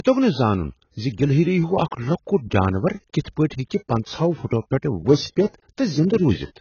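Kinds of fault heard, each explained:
Low-bitrate audio saved at a high bitrate: The speech has nothing above 6.8 kHz and carries the smeared, swirly coding artefacts of a very low-rate encode, yet it sits in a high-rate MP3 container. The dull band limit and artefacts were likely baked in by an earlier encode at around 16 kbit/s, and the generous second encode cannot restore them. A plain low-pass filter would dull the top end without that watery coding texture.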